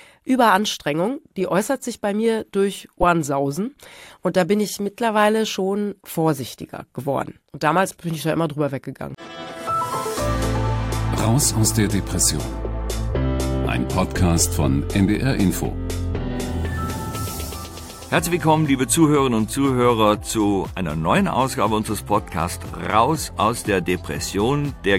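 Broken MP3 bit reservoir, most likely, accounts for the brief disturbance from 3.01 to 3.04 s, where the audio jumps abruptly for about one 24 ms frame. MP3 frames can store part of their data in space left over in earlier frames. If frames go missing, the frame after the gap reaches back for that borrowed data and instead reads bytes from an unrelated frame. It then decodes garbage until the stream realigns, and the sound skips ahead.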